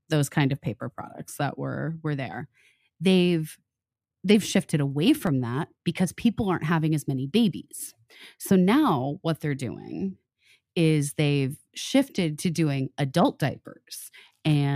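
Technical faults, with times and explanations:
5.27 s, block of digital silence: a tiny dropout of about 1.5 ms, where the speech cuts hard to silence and straight back with no fade. That sharp edge is what makes it a quick tick, and the length fits one missed 64-sample buffer.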